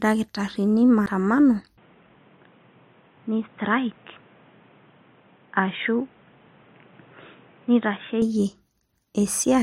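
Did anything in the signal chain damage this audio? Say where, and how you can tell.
Yes, two stages left marks. At 1.06 s there is a CD skip, a playback fault: a very brief mute of around 10 ms, after which the speech carries on from a different point, because the laser jumped to another turn of the disc's spiral. A plain dropout or buffer underrun would resume where it stopped. Here the continuity breaks, and the jump should be a whole number of disc revolutions.

From 1.78 s to 8.22 s the sound turns dull and boxy. Nothing reaches above 3.8 kHz, the level falls by about 5 dB, and a new noise floor sits about 30 dB below the speech. The change is instant, with no silence at the switch, and the original clarity returns at 8.22 s. This is likely the input switched to a poorer device at the capture stage. A lowpass codec would only trim the top. It would not add its own noise floor and level shift.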